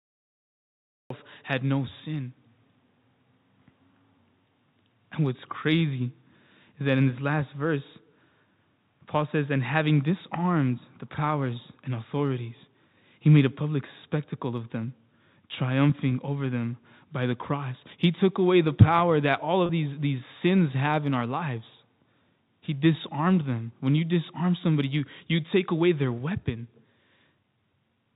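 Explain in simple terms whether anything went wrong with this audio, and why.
There is a cut-off start. The recording began late, so the audio is silent until 1.10 s, then jumps straight into "had no sin" with no natural build-up.

There is also packet loss with pitch repetition, at 19.66 to 19.69 s, between "the power that all" and "these these sins have". About 30 ms went missing, which fits three lost packets. The receiver filled the gap by repeating the last bit of voice pitch, so the sound briefly holds and buzzes.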